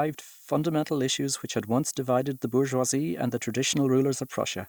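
Throughout the speech, low bit depth with noise shaping: 8-bit rounding error pushed upward sits roughly 25 dB below the signal, a thin hiss climbing toward the treble rather than flat grainy noise.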